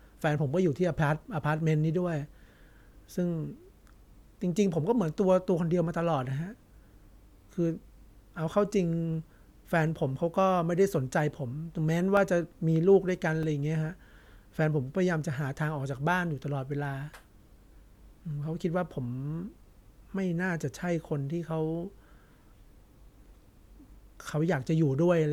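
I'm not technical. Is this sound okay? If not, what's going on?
No. There are two blocks of digital silence in the speech, at 12.17 s and 13.43 s. The first lasts about a millisecond and the second about four. Each time, the sound drops to total silence with no fade, so these are heard as a tick or a dip rather than as a gap of silence.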